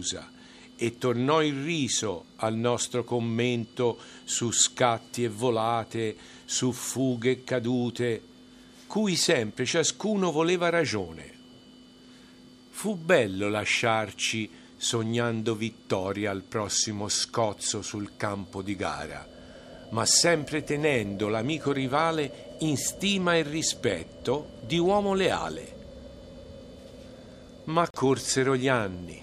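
At 27.90 to 27.95 s the sound cuts to about 37 ms of silence and then resumes, most likely a Bluetooth stall: delayed packets let the receiving buffer run empty. Unlike a glitch or click, the gap is clean silence, not a burst or smeared repeat.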